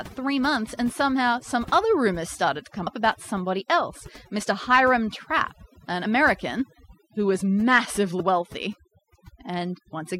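Overdone noise removal runs through the whole speech clip: a noise reduction stage set far too strong pulls individual frequency bands down whenever they sit near its noise estimate, so the background drops and breaks up into twinkling specks. Damaged data in a compressed stream shows up at 2.86 s, between "rumors started to come" and "about somebody else", then again at 6.04 s and 8.19 s. Each time the decoder hits corrupted frames, loses sync and hunts for the next valid header, producing a brief chirp or blip.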